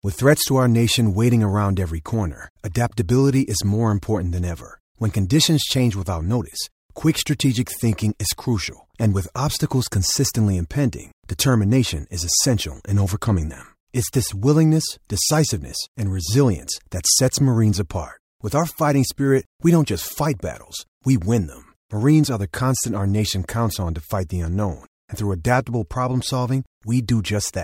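No technical faults occur anywhere in the speech, so there is nothing to describe.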